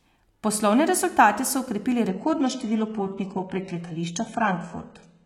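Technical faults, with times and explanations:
2.09 to 5.25 s, adaptive stream at a lower bitrate: after "rezultate so okrepili" the connection slowed and playback jumped without a gap to a far thinner rendition, consistent with about 96 kbit/s AAC falling to roughly 12 kbit/s HE-AAC. Nothing remains above 11.1 kHz, and codec artefacts rise.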